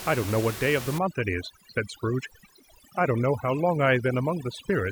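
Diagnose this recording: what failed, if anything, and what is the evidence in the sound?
The failure is overdone noise removal in the call-processing stage, from 0.98 s to the end of the clip at 4.92 s. Once it engages, the room noise sitting about 12 dB below the speech collapses into near silence sprinkled with twinkling specks, and the quieter components of the speech fall under the suppressor's noise estimate and are gated along with it. On a spectrogram, the background becomes scattered isolated flecks, and speech harmonics show ragged gaps.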